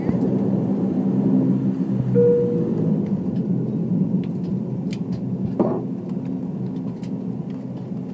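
Nothing stood out on listening to this audio.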